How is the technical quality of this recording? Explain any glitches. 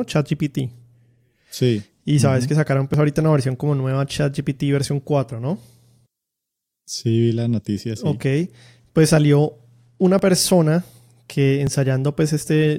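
The speech has three brief glitches, at 2.94 s, 10.19 s and 11.67 s. Each is a point where the sound jumps forward, with no gap of silence. This is likely a dropped buffer (overrun): the capture software did not read its samples before the hardware overwrote them. Roughly 10 ms of audio is lost each time, and the two sides are joined directly, so the sound skips ahead.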